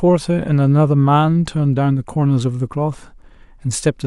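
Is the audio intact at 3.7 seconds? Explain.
No. At 3.7 seconds the speech carries sample clock jitter, present throughout the clip. The converter's clock wavers by under a microsecond, so samples land slightly off time. This adds a faint hiss or roughness, about 50 dB below the signal, strongest on loud, bright sounds.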